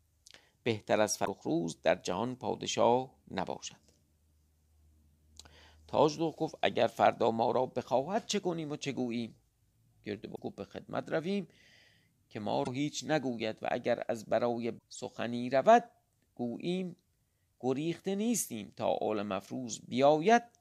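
At 1.22 to 1.28 s, then 10.33 to 10.39 s, 12.61 to 12.68 s and 14.75 to 14.82 s, the speech breaks into short glitches, each about 60 to 70 ms long. That's damaged data in a compressed stream. Corrupted bytes in those stretches make the decoder misread the frames, drop sync and hunt for the next valid header, so you get a brief garbled blip before clean decoding picks back up.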